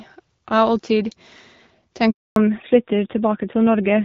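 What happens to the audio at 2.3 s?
At 2.3 s the sound is silent. It falls away quickly at 2.10 s and stays dead until 2.36 s, a 260 ms handover gap. The call was passed between networks, and no speech frames arrived during the switch, so that stretch is simply lost.

When sound returns at 2.36 s it is duller and rougher through to the end. This is a fallback to narrowband: the call dropped from HD Voice to an older codec, so nothing above 4 kHz survives. The rasp fits narrowband AMR at a modest rate.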